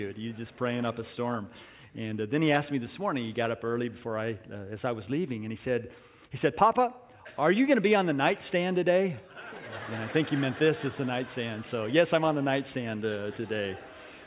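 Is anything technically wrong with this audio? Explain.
No, nothing technically wrong can be heard in this audio. There is no moment in it where a fault shows itself.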